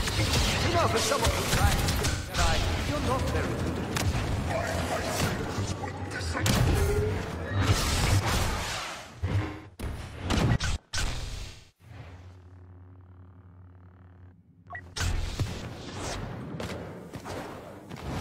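Smeared, noisy, phasey patches break into the sound at 2.10–2.38 s, 6.62–6.98 s, 9.18–10.27 s, 11.48–11.93 s and 15.88–15.95 s. The third dips toward silence during a gap of roughly a fifth of a second. This is AAC frame loss with concealment: the decoder rebuilt missing frames from the last good spectrum.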